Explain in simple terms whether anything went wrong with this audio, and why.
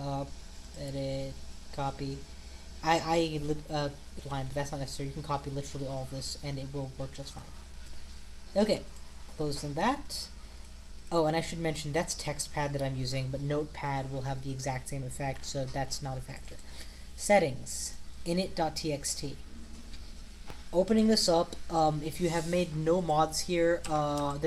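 Three things go wrong in this audio.

At 4.2 s there is a skip ahead. A chunk of sound, roughly seven tenths of a second, never gets played. It was thrown away on its way to the listener, or by the receiver's holding area (the jitter buffer) when that area filled up. Playback jumps straight past the gap and joins the two sides with no pause, so the sound lurches forward abruptly.

From 4.33 s to 7.74 s comes a jitter buffer speed-up. After the skip, the receiver still has more sound stored than it wants, so it trims many tiny slices out, each only a fraction of a moment long. That removes about a fifth of a second in total and makes the sound run about 6 percent faster, at an unchanged pitch. The result is a slightly hurried, rushed feel until the stored amount is back to normal.

At 20.5 s there is a single loud pop, a sharp click clearly louder than the surrounding audio, and the sound carries on underneath it. 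This comes from a sudden jolt of electrical voltage added to the signal, likely caused by a plug, switch, static discharge or a hardware driver hiccup. The equipment downstream shapes that jolt into the short, hard snap you hear.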